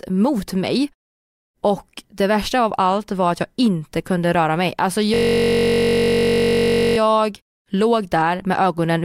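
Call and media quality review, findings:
Steady buzz at about 47 Hz, 5.14–6.98 s. System hang loop: driver or host froze while the hardware kept replaying one 21.33 ms ring buffer, which fits 1024 samples.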